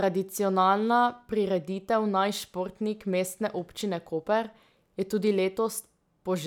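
Nothing in the speech stood out as a technical problem on listening.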